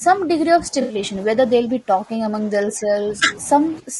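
Throughout, the speech is rough and grainy with a thin, synthetic top, which points to low-delay AAC compression, likely AAC-ELD at around 32 kbps. The damage is constant rather than coming and going.

Speech suppressed in double talk pumps the level down at 0.00–0.04 s, 0.23–1.37 s, 1.58–3.23 s and 3.79–4.00 s. The dips range from about 10 dB to roughly 20 dB, likely from an echo canceller ducking during overlap. These are level dips, not added noise.

Inside the second dip, at 0.81–0.95 s, AAC frame loss with concealment leaves a smeared, noisy patch of 80 ms, which fits about four lost frames being filled in. Unlike the dips, this patch changes the texture of the sound rather than just its level.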